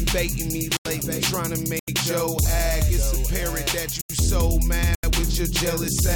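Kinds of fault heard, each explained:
Block of digital silence: four times, at 0.77, 1.79, 4.01 and 4.95 s, the sound drops straight to silence for about 85 ms and snaps back. That length fits a 4096-sample buffer the program didn't fill in time.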